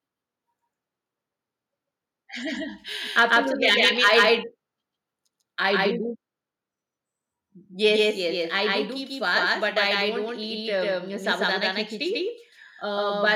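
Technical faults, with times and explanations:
Throughout: doubled audio track. Every sound is followed by a second, full-band copy about 150 ms later at roughly the same level, giving a flat slapback echo with no decay or room colour. This is likely a second capture through a slower path, or two out-of-step copies in an edit. On a waveform each onset appears twice, evenly spaced. A spectrogram shows every feature duplicated one fixed step to the right, just as bright and sharp-edged.
3.18–3.37 s and 3.68–4.28 s: microphone overload. The loudest peaks go past the converter's limit, by about 3 dB in the first stretch and about 6 dB in the second. This is likely because the input level was set too high. The flattened tops give a harsh, crackling edge, worse in the second stretch, though only a small share of samples is actually cut. On the waveform the peaks show as flat plateaus. A spectrogram shows vertical smears of broadband distortion running up into the high kHz range at those moments.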